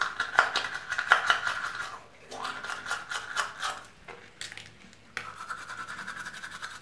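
No technical faults occur at any point in this audio, so there is nothing to describe in time order.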